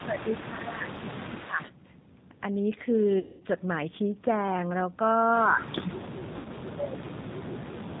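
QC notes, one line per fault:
Throughout: G.729 codec. The speech sounds slightly rough and synthetic, with a dull top where nothing above 4 kHz survives. The damage is plainly audible. At 8 kbit/s this codec does not carry the waveform itself. It sends a vocal tract filter, a pitch predictor and a few pulses per 10 ms frame, and the decoder rebuilds speech from those.
0.00–0.41 s, 0.92–1.36 s and 1.64–1.70 s: echo leak. A faint second copy of the audio trails 164 ms behind, roughly 20 dB below the speech in the first two stretches and weaker still, around 25 dB down, in the brief last one. The likely cause is a far end playing the call on a loudspeaker, with its echo canceller failing to strip everything its microphone picked up.
0.04–0.26 s, 0.43–1.61 s and 5.46–8.00 s: speech suppressed in double talk. The voice sinks and thins, losing level and presence. The dip is mild at first, around 10 dB, deepens to about 15 dB in the second stretch, and reaches roughly 25 dB over the last two seconds or so. 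This is likely an echo canceller hearing both ends at once, unable to tell the talker from loudspeaker echo and turning everything down.
3.19–3.43 s and 6.36–6.48 s: VoIP packet loss concealed by the speech codec. The sound is stretched and fades out, about 210 ms long in the first gap and 90 ms in the second. The voice stays weak and distorted for a short while after each gap. The length of each gap points to several consecutive lost packets. The decoder covers the gap by extrapolating from its last pitch and filter while lowering the gain. Because each frame builds on the one before, it needs time to recover once packets arrive again.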